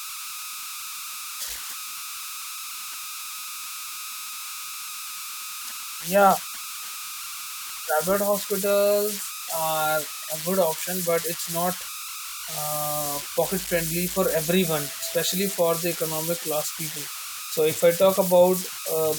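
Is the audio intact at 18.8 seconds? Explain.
No. At 18.8 seconds, as throughout the speech, a whistle around 1.5 kHz and grainy noise sit about 8 dB below the signal. These are converter idle tones: an undithered delta-sigma converter settles into repeating bit patterns on small inputs, producing spurious tones.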